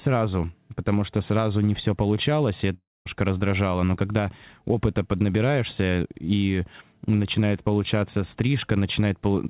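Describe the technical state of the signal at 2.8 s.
At 2.8 s you're inside a gap from 2.74 to 3.07 s, likely a long network dropout: the last sound smears into a fading buzz, then silence, and resumes with audio missing.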